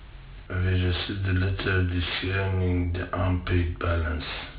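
Aliasing runs through the whole speech clip. High content above 4 kHz was not filtered before the rate dropped, which fits an 8 kHz sample rate. It folds back as false tones, roughly 15 dB below the speech. Sibilants sound gritty and metallic.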